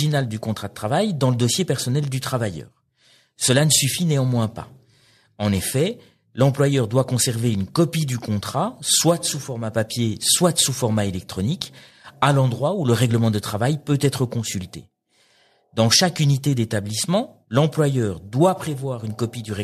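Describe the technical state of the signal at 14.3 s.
At 14.3 s the speech signal is intact, with no audible technical fault at that moment.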